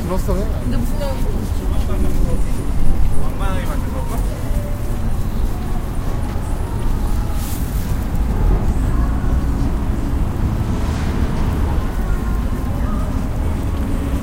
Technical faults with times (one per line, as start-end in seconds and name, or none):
none